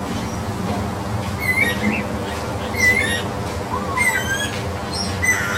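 From the first moment to the end, the everyday sound has a hollow, phasey colour. This is channel delay with comb filtering. One channel runs late by around 10 ms, and the two channels are then folded to mono. Content shared by both cancels at evenly spaced frequencies. The first notch sits near 50 Hz, with further notches roughly every 100 Hz above it. The sound loses body and takes on a thin, tubby character.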